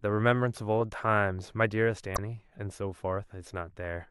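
Damaged data in the compressed stream appears from 2.13 to 2.18 s in this speech. Corrupted bytes left the decoder misreading those frames and losing sync until it found the next valid frame header, producing a brief glitch about 50 ms long.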